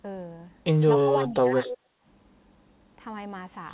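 Narrowband call speech, with nothing above 4 kHz, shows three echo-canceller faults. From 0.95 to 1.57 s the talker's level sinks by about 15 dB over a total of about half a second. This is speech suppressed in double talk, likely from the canceller ducking the near talker while the far side spoke. From 1.64 to 1.77 s a delayed copy of the voice trails 244 ms behind, about 10 dB below the speech. This is an echo leak, likely residual loudspeaker pickup sent back. Its fixed lag separates it from reverberation, which smears continuously from the source. From 1.85 to 2.04 s the room noise itself, not the voice, drops by about 12 dB for roughly a fifth of a second before returning, which marks background gated by the echo canceller rather than a network dropout.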